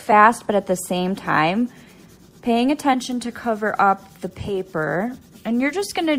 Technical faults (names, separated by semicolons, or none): none